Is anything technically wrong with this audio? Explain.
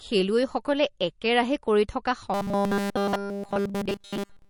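Yes, two faults can be heard.

From start to end the speech sounds dull and watery, with plainly audible codec damage. This is likely MP3 compression at a low bitrate, around 41 kbps. Short of bits, the encoder cuts the treble at a fixed frequency and drops weak frequency lines that flicker on and off between frames, leaving the swirly texture and smeared attacks.

From 2.34 s to the end, just after "খেলুৱৈসকলে একেৰাহে কৰি থকা", the speech turns into a rigid, metallic buzz at 200 Hz that only loosely follows the speech. This is robotic sound from repeated short buffers, likely because audio arrived too rarely and a tiny slice was looped in its place. Essentially all of that stretch is repetition, and the 200 Hz buzz fits a repeated slice of about 5 ms.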